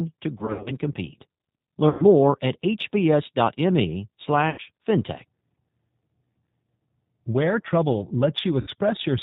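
Throughout, the speech carries plainly audible damage from the G.729 codec at 8 kbit/s. Nothing above 4 kHz survives, and each 10 ms frame is rebuilt from a vocal tract filter and a few pulses. The result sounds rough and slightly synthetic.

VoIP packet loss concealed by the speech codec comes first at 0.38 to 0.73 s. About 160 ms of audio goes missing, scattered over 280 ms, with runs of up to 80 ms. Shorter gaps follow at 1.89 to 2.05 s (100 ms), 4.50 to 4.62 s (80 ms), 6.63 to 6.65 s (20 ms) and 8.61 to 8.69 s (60 ms). At each gap the decoder stretches its last pitch and filter into a fading buzzy tone or coloured noise. The speech stays weak briefly after.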